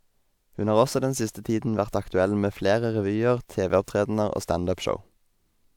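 No technical faults can be heard anywhere in this recording.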